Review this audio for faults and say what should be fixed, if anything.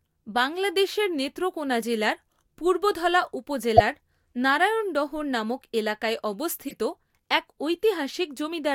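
Three corrupt frames were decoded. After "বাংলাদেশের নেত্রকোণা জেলার পূর্বধলা", a loud error near full scale runs from 3.77 to 3.81 s, about one frame. After "নারায়ণডহর নামক এলাকায়", a softer error around -20 dBFS runs from 6.68 to 6.74 s, spanning a couple of frames. Flipped bits scrambled the gains and codes. Error checking should drop bad frames and conceal them.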